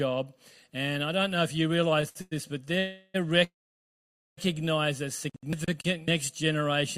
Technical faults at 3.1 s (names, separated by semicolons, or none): call audio freeze